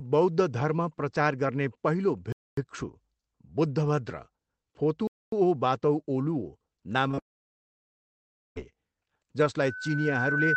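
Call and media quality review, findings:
Gap between chunks, 2.32–2.57 s, right after "प्रचार गर्ने पहिलो". A 250 ms hard-edged hole of silence. Probably the chunked delivery or playback stage. Nothing is lost, but a clean gap is left at the join.

Gap between chunks again, 5.07–5.32 s, same 250 ms hole. Joins fall every 2.5 s, which is the giveaway: it's chunk-boundary padding or late chunk starts, not network loss.

Short concealed packet loss, two back-to-back events at 7.11 and 7.15 s, about 20 ms missing each. Jitter buffer or decoder concealment. The receiver patches the holes by extending the last sound, so you hear a quick smear or wobble rather than a clean cut.

Long network dropout, 7.19–8.58 s. The concealment fill fades out into roughly 1.1 s of near-silence. Audio resumes further on with that stretch simply gone. The likely cause is a network outage where no packets reached the receiver, so there was nothing to play.

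Loudspeaker feedback squeal, 9.63 s to the end. A single 1.5 kHz tone keeps swelling over roughly a second and a half, reaching about 15 dB over the signal. That's an acoustic loop: the mic picks up its own speaker, and loop gain tops one at 1.5 kHz.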